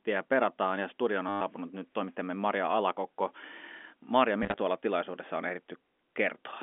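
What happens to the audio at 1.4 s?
Right around there, from 1.29 to 1.41 s, between "perataan ja studion" and "nyt toimittajamme", you get packet loss with the last packet repeated. About 120 ms of audio went missing, and the receiver kept replaying the last good chunk until fresh data arrived. The run buzzes at roughly 100 Hz, which points to 10 ms packets. It comes across as a brief robotic stutter.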